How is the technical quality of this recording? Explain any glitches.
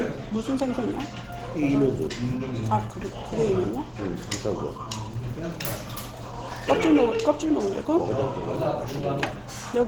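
The technical quality is limited by plainly audible low-rate compression that runs through the whole clip.

Opus compression, throughout: the texture is hoarse and somewhat muffled, with a grainy, noise-like roughness on tonal parts. This likely comes from Opus at a low bitrate, around 16 kbps, in its hybrid mode, where a speech-style coder handles the lower range and the upper bands are rebuilt from folded or noise-filled energy. The band still extends to about 20.2 kHz, but that top end is approximate rather than faithful.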